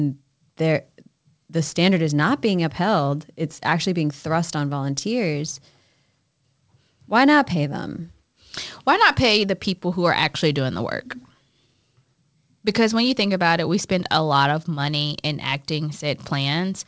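Nothing here sounds wrong: it's a stretch of speech that came over a call, and the way the top end stops at about 8 kHz fits a wideband codec like G.722 doing its normal job.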